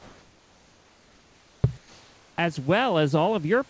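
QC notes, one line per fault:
1.78–2.38 s, comfort noise in place of the background: for 0.6 s the room's detailed background gives way to a steady, featureless hiss about 3 dB quieter, likely from discontinuous transmission, with the receiver filling the pause with synthesised noise shaped like the background.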